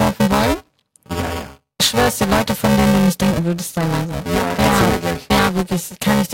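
Speech with buffer tearing the whole way through: a gritty robotic buzz near 345 Hz, consistent with a 128-sample buffer, where roughly a third of each period replays audio from a few milliseconds earlier.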